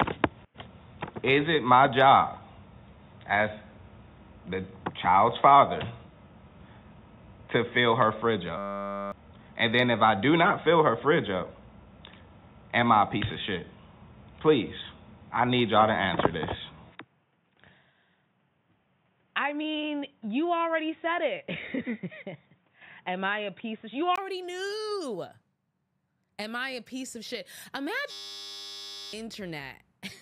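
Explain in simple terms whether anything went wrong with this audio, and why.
Two things went wrong.

The first is an input switched to a poorer device. From the start until 24.18 s, the sound is dull and boxy. Nothing above about 3.7 kHz comes through, so the sharp, bright detail is missing. The sound also has a slightly different loudness and its own faint background noise. At 24.18 s there is a tiny gap, and then the sound opens up and gets clearer. The likely cause is that the system was recording through a weaker microphone or a headset's call mode, then switched back to a better one.

The second is a system hang loop, which happens twice. From 8.58 to 9.12 s, and again from 28.11 to 29.13 s, the sound turns into a steady buzz. The computer froze, and the sound hardware kept replaying the same 10 ms scrap of audio, 100 times per second. Repeating such a short scrap that fast is what makes the buzz. 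The real audio from those moments is lost: about half a second the first time and about a second the second time.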